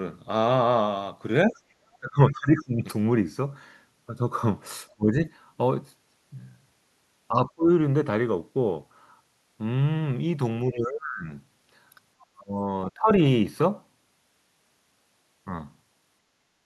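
The speech dips in level at 1.5 to 1.58 s, 1.99 to 2.85 s, 4.96 to 5.3 s, 7.29 to 7.7 s, 10.69 to 11.3 s, 12.32 to 12.68 s and 12.94 to 13.1 s. Each dip is most likely speech suppressed in double talk: the echo canceller turned the talker down while the far side was also speaking. The drops reach about 15 to 30 dB, deepest near 10.7 s and 12.3 s. The longest stretches last most of a second.

At 12.2 to 12.26 s, just before one of those dips, a very faint scrap of the other side's voice leaking through can be heard, around 35 dB below the talker. This is likely residual loudspeaker sound that the canceller did not fully remove from the microphone. It is a different voice from the talker's, not a delayed copy of their own speech, and it is brief rather than a sustained second voice.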